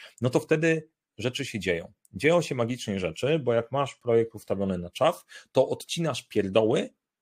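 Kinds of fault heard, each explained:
No technical faults are audible anywhere in the speech.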